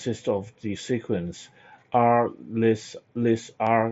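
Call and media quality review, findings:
No faults found in this speech recording.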